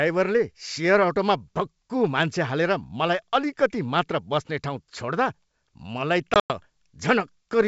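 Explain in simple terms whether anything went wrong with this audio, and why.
Near the end, from about 6.34 to 6.51 s, the speech drops out in a few abrupt gaps of dead silence, the longest about a tenth of a second, and then comes back slightly distorted for a moment. This is packet loss on an ADPCM call. Around seven small chunks of the wideband G.722 call never arrived. The receiver filled them with silence, and its running guess of the sound briefly lost track of the sender's.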